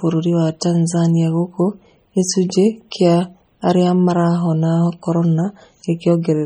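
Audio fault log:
Throughout, MP3 compression: the speech sounds watery and swirly, with metallic chirping on the s sounds. The likely cause is an MP3 encoder starved of bits. The damage is heavy enough to fit a bitrate of about 32 kbps. The encoder discards weak frequency lines, and these flicker on and off between frames.
At 0.60 s, pre-echo: a brief hiss of about 19 ms arrives just ahead of a sharp attack, and the onset sounds softened and smeared rather than crisp. The attack falls late in a transform block. The quantisation noise the codec sized for the loud part is spread across the whole block, so it also fills the quiet moment before the attack, where nothing masks it.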